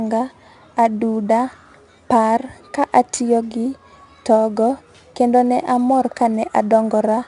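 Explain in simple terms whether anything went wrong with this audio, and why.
Throughout, the speech was stored with 4-bit ADPCM compression, each sample a coarse step, so loud syllables carry gritty hiss and nothing sounds above 10.6 kHz.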